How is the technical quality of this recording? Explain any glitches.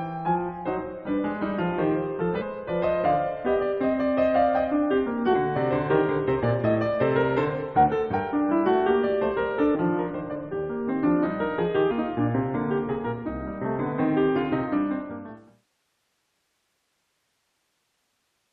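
The music is marred by three brief glitches from damaged data in a compressed stream, at 2.40 to 2.43 s, 9.74 to 9.76 s and 11.90 to 11.92 s. Corrupted frames make the decoder lose sync and hunt for the next header, giving a short chirp, squawk, click or hole. The smooth fade-out from about 14.5 s to 15.69 s is clean.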